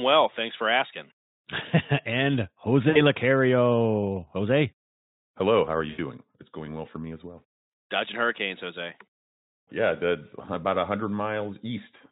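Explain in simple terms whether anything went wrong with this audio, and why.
VoIP packet loss concealed by the speech codec appears three times: at 2.89 to 3.00 s, at 5.89 to 5.99 s, and at 7.69 to 7.73 s, just after "for me as well". Small chunks of the call, about 60, 80 and 40 ms long, never arrived. The Speex decoder, which is otherwise clear, filled each gap by stretching the last bit of sound into a fading buzzy tone or noise, and the audio stays weak or distorted for a moment afterward.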